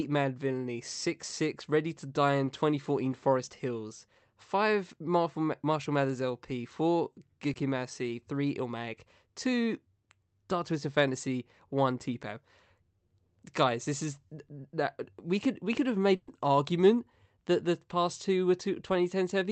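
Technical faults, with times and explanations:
2.45–2.49 s and 7.53–7.57 s: short concealed packet loss. At each point about 20 ms of the call failed to arrive in time, and the receiver covered the gap by extending the preceding sound, following its pitch where it was voiced or substituting shaped noise where it was not, before crossfading back into the real signal. The result is a brief smear or wobble lasting a few hundredths of a second, with the Opus path's roughly 8 kHz audio band continuing on either side.
16.15–16.29 s: burst of packet loss. Between "could we could have" and "argument that the past", about 120 ms of consecutive audio was lost or arrived too late to play. The decoder filled the whole span by continuing the last sound and attenuating it as the gap lengthened, so a voiced sound becomes a held buzz and an unvoiced one a fading hiss, with no true silence. Playback then resumes further along, and the material from that 120 ms is missing.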